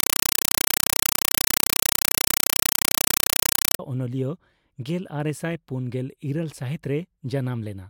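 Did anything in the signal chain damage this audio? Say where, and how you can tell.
Yes. From 0.00 to 3.79 s, a compressed stream was played as audio at the playback or digital-link stage. In place of speech there is very loud, chattering static: bursts of full-band noise about 5.33 ms long, repeating 31.25 times a second. That pattern fits AC-3 frames, likely at 256 kbps, passed through without decoding. On a waveform this appears as loud noise blocks separated by near-silent padding. A spectrogram shows evenly spaced broadband vertical stripes.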